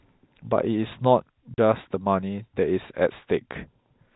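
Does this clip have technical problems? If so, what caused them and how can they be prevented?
Yes. Packet loss filled with silence cuts a clean 40 ms hole into the speech, band-limited to 4 kHz by its G.711 telephone coding, from 1.54 to 1.58 s. That length fits two lost 20 ms packets. The gap has abrupt, hard edges. Unlike packet loss concealment, nothing is repeated or smeared across it, and unlike a gradual fade it drops straight to silence. Forward error correction plus a jitter buffer with loss concealment would prevent it.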